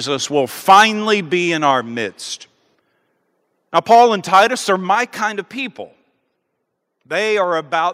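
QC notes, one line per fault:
0.69–0.84 s, 3.76–4.04 s and 4.33–4.43 s: microphone overload. The loudest syllables, including the first one just before "be in", break into a harsh crackle. The likely cause is a microphone input set too high, so the peaks run past the converter's limit and their tops are sheared off. The peaks would have gone about 7, 3 and 6 dB over full scale. On the waveform, flat-topped plateaus cover roughly 15%, 5% and 7% of the samples in each span. The spectrogram shows broadband smearing above the harmonics at those moments.
0.71 s, 3.95 s and 4.95 s: microphone volume stepped down. The voice and the background both drop in level at once, with no fade. The likely cause is the call software reacting to the clipping by lowering the device's input gain in a single step. The first two cuts are about 2 dB and land inside the overloads, one just before "be in". The third is about 5 dB, just before "kind of people". 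The waveform envelope shows a sharp downward step, and the spectrogram dims uniformly across all frequencies.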